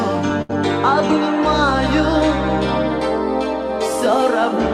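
At 0.42–0.51 s, a burst of packet loss: the last sound is held and faded over 72 ms rather than cut to silence, then resumes with 80 ms skipped.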